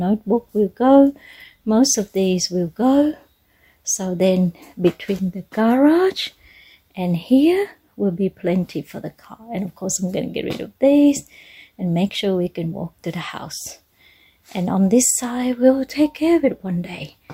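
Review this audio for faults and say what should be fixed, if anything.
No faults turn up anywhere in the recording, so there is nothing to fix. No change to the recording or playback chain is called for.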